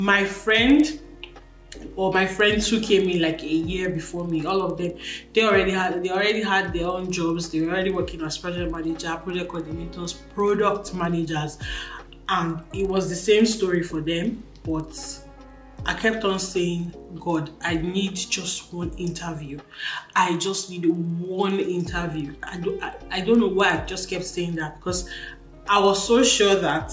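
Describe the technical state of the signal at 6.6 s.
At 6.6 s the signal carries a resampler restarted on every block, present throughout the clip. Each block, consistent with 50 ms blocks in a likely 48 kHz to 16 kHz conversion, is converted without its neighbours, leaving edge errors heard as a steady 20 Hz tick or buzz wherever signal is present.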